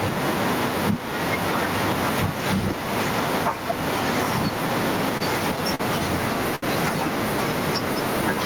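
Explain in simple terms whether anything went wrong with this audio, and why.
Two things go wrong in this speech recording.

The first is gain pumping, and it runs through the whole clip. Loud and quiet moments sound squashed toward the same level. The likely cause is a microphone level set far too high, with a fast limiter constantly pulling it back down. The level swings by a large amount.

The second is a short stall from a late packet, which happens three times: at 5.17 s, 5.75 s and 6.55 s. Each time, a piece of the audio did not arrive on time. The receiver held the last sound longer while it waited, for 28 ms, 45 ms and 69 ms. Then it carried on from the same point. No speech is lost. You hear a brief drawn-out sound, perhaps with a faint buzz, and each stall is longer than the one before.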